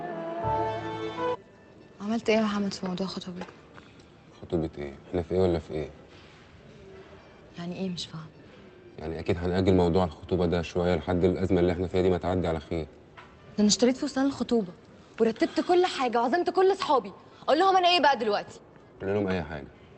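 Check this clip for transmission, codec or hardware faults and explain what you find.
Nothing here points to a transmission, codec or hardware problem: the audio just carries the ordinary character of a call path, with the top end stopping around 8 kHz in a way that fits Opus running at roughly 24 kbps.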